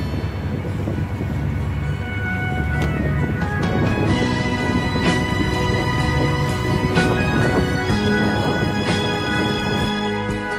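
There are no technical faults to describe in this audio.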